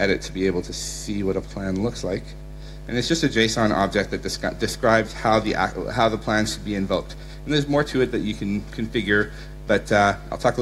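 No technical faults are audible.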